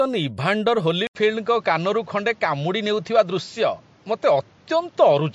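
From the start the speech has a watery, swirly quality, with sibilants turning metallic and nothing above 11.3 kHz, the signature of MP3 compression, likely at a low bitrate near 48 kbps. Unlike a simple band limit, weak frequency lines flicker on and off between frames.

At 1.07 s a short gap of 80 ms precedes a sudden change: the treble now stops at 7.6 kHz, a new noise floor sits roughly 30 dB below the speech, and the level stays about the same. This fixed step in tone is likely an input switched to a poorer device, distinct from the codec's fluttering artefacts, and it lasts until 5.34 s.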